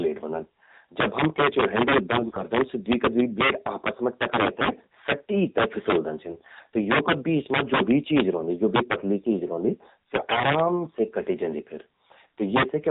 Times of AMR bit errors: 2.18-2.44, 4.57-4.87, 6.28-6.52, 10.14-10.44

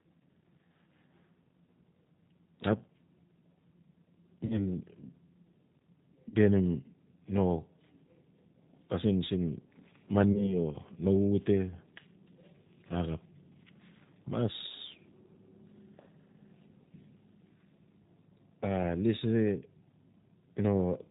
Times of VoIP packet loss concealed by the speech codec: 4.46-4.68, 6.29-6.36, 10.33-10.53

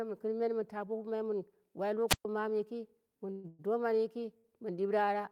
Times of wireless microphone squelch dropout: 2.08-2.25

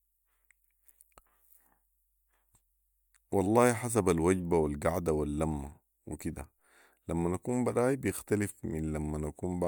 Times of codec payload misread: none

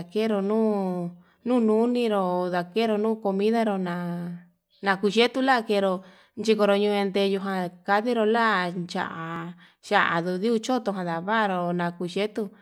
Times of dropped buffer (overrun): 9.36

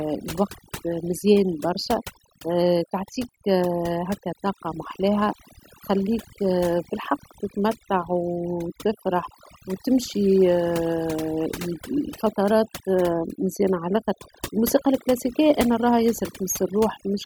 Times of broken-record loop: none

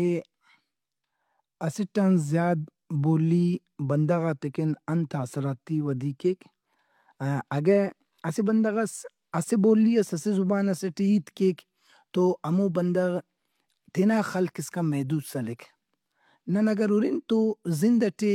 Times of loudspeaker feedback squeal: none

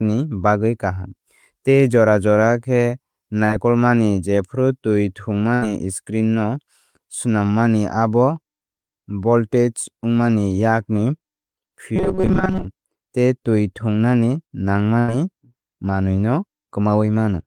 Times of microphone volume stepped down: none

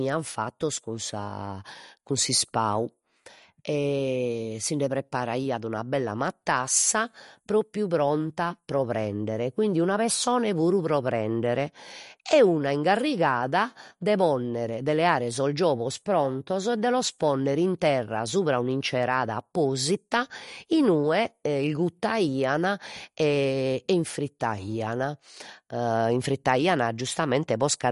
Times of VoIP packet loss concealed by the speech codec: none

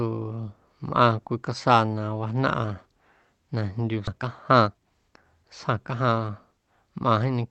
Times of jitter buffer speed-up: 4.12-6.85

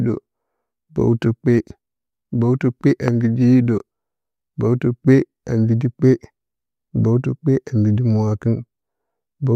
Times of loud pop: 3.08-3.10

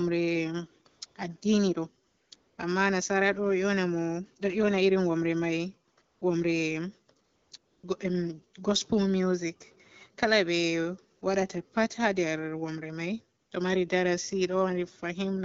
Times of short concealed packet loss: none

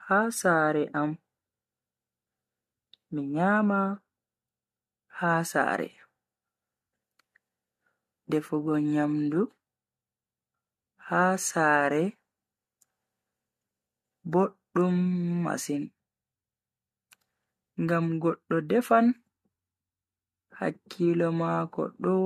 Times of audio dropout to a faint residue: none

